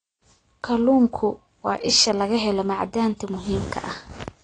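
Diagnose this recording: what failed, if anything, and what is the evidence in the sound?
The failure is at the codec stage. Throughout the speech, nothing reaches above 10.1 kHz. The top of the spectrum is simply missing, so the sound is dull. Codec damage is plainly audible. Sibilants turn fizzy and smeared, and sustained sounds warble. The likely cause is AAC compression, AAC-LC at a low rate. The sound fits about 32 kbps. At that rate the encoder drops the high bands and starves the rest of bits, leaving shifting spectral holes.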